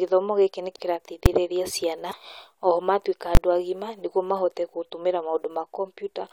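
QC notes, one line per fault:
0.75–0.80 s: broken MP3 bit reservoir. The sound jumps ahead, and about two 26.1 ms frames decode damaged, likely from frames missing before them.
1.26 s: invalid numbers at full scale. A single loud bang. A 5 ms block of invalid values was pinned to one extreme value.
2.10–2.13 s, just before "oho matuĩka": broken MP3 bit reservoir. A brief skip with about one damaged frame, likely because the decoder borrowed bytes from a different frame.
3.35–3.37 s, between "oho matuĩka" and "agima nĩguo mahote": invalid numbers at full scale. A 20 ms block held at one extreme value, heard as loud pops at each edge with nothing between them.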